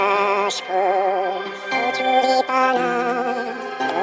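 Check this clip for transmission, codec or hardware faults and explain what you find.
A wrong sample rate runs through the whole clip. Everything plays at twice the intended speed and a full octave (12 semitones) higher, which fits 8 kHz audio played at 16 kHz without conversion. Unlike a pitch shift or time-stretch, tempo and pitch rise together by the same factor.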